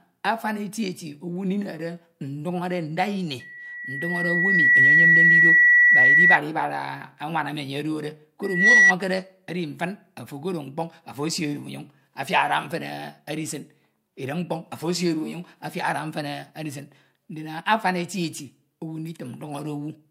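A single piercing tone near 1.9 kHz swells up from 3.40 s, taking about a second and a half to reach full strength, then howls on to 6.38 s at roughly 15 dB above the speech. The same pitch returns from 8.42 to 8.93 s, this time rising within a fraction of a second. This is loudspeaker feedback squeal: the microphone picked up its own loudspeaker, and at 1.9 kHz the loop gain exceeded one, so the tone fed on itself.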